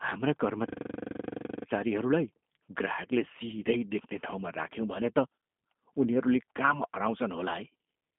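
From start to finish the speech has passed through a G.729 codec, which discards the waveform and rebuilds each 10 ms frame from a vocal tract filter, a pitch predictor and a handful of pulses, which fits an 8 kbit/s VoIP link. The line band runs from about 200 Hz to 3.6 kHz, with nothing above 3.8 kHz, so the sound is thin and muffled. The codec damage is plainly audible as a rough, buzzy, synthetic texture.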